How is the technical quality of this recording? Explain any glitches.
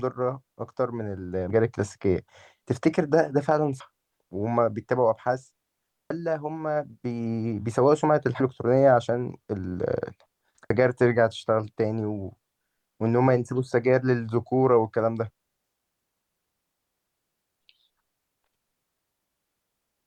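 The recording has a recurring dropout problem: the speech skips forward six times, at 1.50, 3.80, 6.10, 8.40, 10.70 and 13.00 s.

These are audio missing between chunks. Each skip removes about a fifth of a second, and the audio on either side is butted together with no gap. The cause is likely a recorder writing 2.5 s chunks and dropping a piece at each handover, which is why the skips fall about 2.3 s apart in the output.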